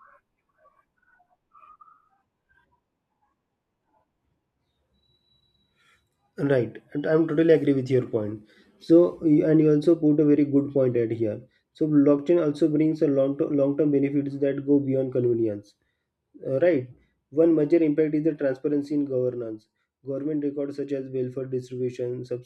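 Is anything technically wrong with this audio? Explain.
No, nothing here seems technically off to me; it's just speech coming through the way it should.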